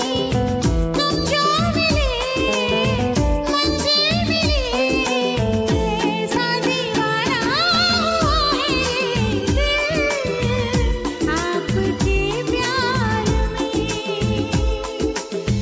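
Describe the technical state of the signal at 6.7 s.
At 6.7 s the signal is intact, with no dropout, distortion, clipping or other fault audible at that point.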